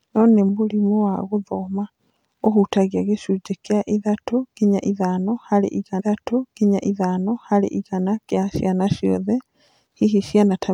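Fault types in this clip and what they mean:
Stream segment repeated: the player queued the same stretch of the stream twice, so about 2.0 s of speech from 5.99 s to 7.99 s plays a second time before "kĩa ciana ciothe". A small blip marks the jump back. On a spectrogram, the same two-second block of harmonics and formant tracks appears twice in succession. The waveform shows an identical envelope duplicated end to end, with an abrupt discontinuity at the seam.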